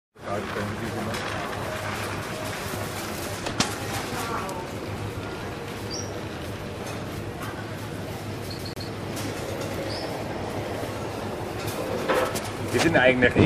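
From 8.58 to 8.88 s, the CD stuck on one turn: a 150 ms loop plays twice, each jump a brief gap visible as repeated blocks.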